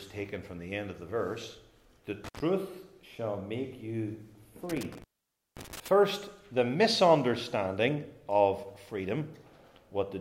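Intermittent contact at 2.24 to 2.40 s and again at 4.70 to 5.88 s: a loose cable or plug briefly opens, so the audio drops out with crackle at the break, for about 89 ms the first time and about 531 ms the second.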